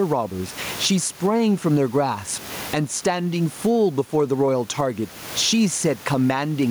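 Gain pumping runs throughout this speech recording. The room noise sits about 31 dB below the voice, and the gain swings by around 20 dB. The likely cause is input gain set far too high, with a fast limiter clamping down on each peak and leaving the speech squashed.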